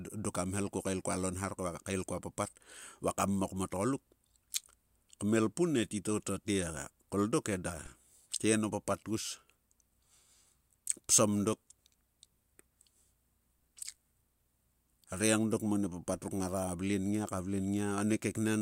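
A DC step at 7.86 s in this speech recording: the waveform's zero line jumps by about -38 dBFS, giving a brief low thump, then bleeds away through a 20 Hz high-pass.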